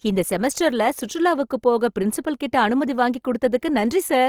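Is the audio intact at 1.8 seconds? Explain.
No. Like the rest of the clip, 1.8 s carries plainly audible Opus compression, likely a 24 kbps CELT encode that keeps band energies but fills starved bands with folded or noise content, leaving speech grainy and rough.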